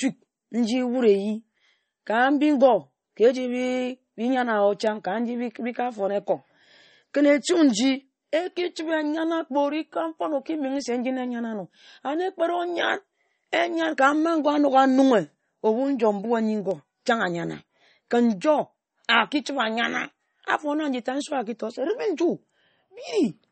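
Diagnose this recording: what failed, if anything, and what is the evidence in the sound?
MP3 compression, throughout the clip, at the codec stage. The speech carries plainly audible codec damage: there is no content above 8.4 kHz, and what remains has a watery, swirling texture. The likely cause is an MP3 encode short of bits, which fits a low bitrate around 32 kbps. The encoder cut the treble at a fixed frequency and zeroed weak frequency lines, so detail switches on and off from frame to frame.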